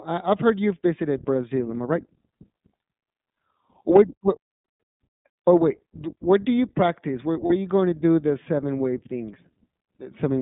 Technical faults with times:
0.00-10.42 iLBC codec
7.46-7.52 lost iLBC frames

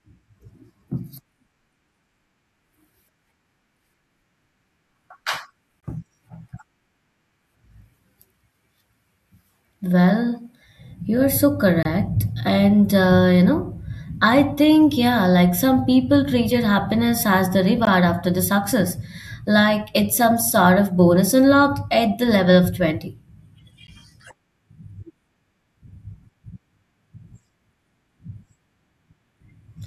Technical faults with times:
5.80-5.83 gap between stream segments
11.83-11.85 gap between stream segments
17.85 gap between stream segments
23.87 gap between stream segments

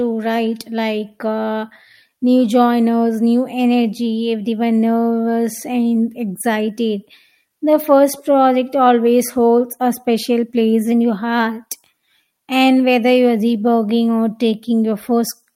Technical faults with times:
0.00-15.55 clock drift between sender and receiver
0.14-15.51 repeated timing corrections
10.92-12.07 drift correction step

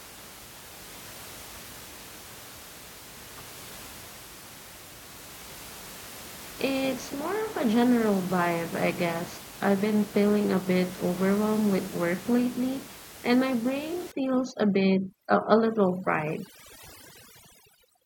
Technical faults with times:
14.12-18.06 overdone noise removal

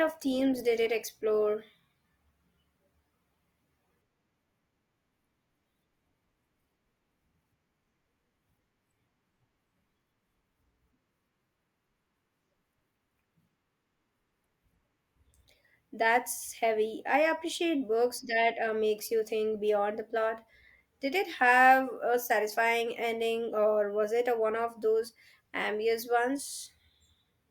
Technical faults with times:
0.00-4.00 adaptive stream starting at a low bitrate

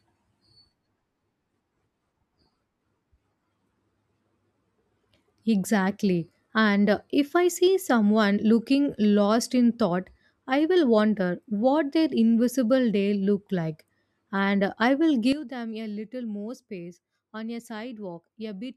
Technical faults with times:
15.33-18.76 sudden gain jump

